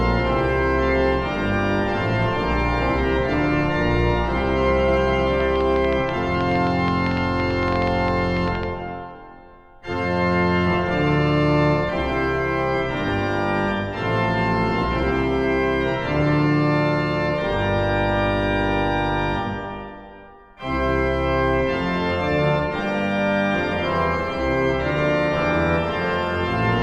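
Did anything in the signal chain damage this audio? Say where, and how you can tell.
Yes. Between 5.41 and 8.64 s a train of clicks rides over the audio, most likely from interference leaking into the analogue wiring or a faulty connection or power supply, injecting short pulses. Around thirty near-identical ticks arrive at an uneven spacing averaging about 8.4 per second, peaking roughly 10 dB above the signal. Their matching shape and persistence through the whole stretch point to an external repeating source rather than damage in the recording itself.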